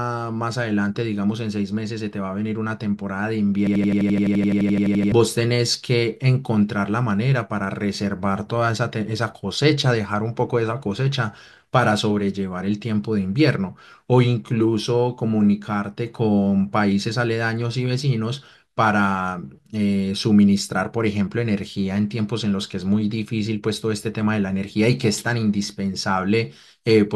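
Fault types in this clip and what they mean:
System hang loop: The speech freezes into a repeating fragment from 3.67 to 5.12 s. The playback system stalled while the sound hardware kept replaying the same short stretch of its ring buffer. Each cycle lasts 85.33 ms, which fits a 4096-sample buffer. The piece repeats 17 times at 11.7 Hz. That gives a rapid, machine-gun stutter rather than a steady buzz. About one and a half seconds of real speech never play.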